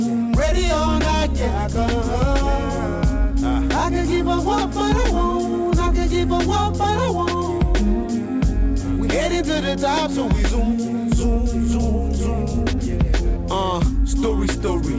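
There are no technical faults to describe in time order; the sound has simply come over a call path that carries nothing above 8 kHz.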